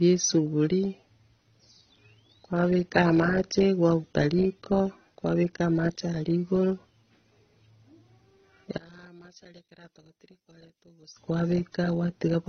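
Throughout the clip, the speech is band-limited, with nothing above 6.3 kHz. Smeared, swirly artefacts sit on top of one another. This is likely transcoding between lossy codecs. The sound suggests a low-rate AAC-LC encode, then a further HE-AAC pass that re-encoded the earlier damage.

From 8.78 to 11.17 s, the speech drops by about 20 dB. This is likely one channel inverted. The centred speech cancels when the channels are summed to mono, leaving only their faint difference.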